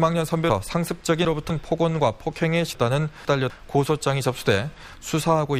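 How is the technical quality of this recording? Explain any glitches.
Two brief jumbled passages spoil the recording. From 0.5 to 1.5 s and again from 2.75 to 3.5 s, the sound lurches as chunks play out of order: one 250 ms block arrives three, then two, places late, leaving three hard joins each time.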